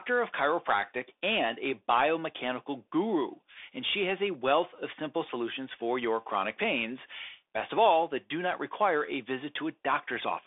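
Throughout, the Bluetooth CVSD headset codec's one-bit adaptive steps, which fit a 64 kbps link, leave plainly audible granular hiss and scratchy s sounds. The spectrogram shows a 250 Hz to 3.6 kHz band with nothing above 3.8 kHz.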